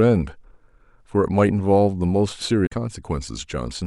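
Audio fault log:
2.63–2.72 s, damaged data in a compressed stream: for about 90 ms the speech is broken up, because the bytes in that stretch of the encoded stream are corrupt. The decoder misreads those frames, loses its place and hunts for the next valid frame header before clean speech resumes. On a spectrogram this shows as a short disruption breaking the harmonic pattern, and on the waveform as an abrupt discontinuity.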